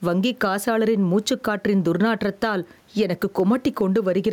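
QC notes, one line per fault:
Throughout, gain pumping: the gain swings by around 10 dB, pulling down whenever the talker gets loud, which squashes the dynamics, with the room noise sitting about 43 dB under the speech. Likely the input gain is set way too hot with a fast limiter clamping down on it.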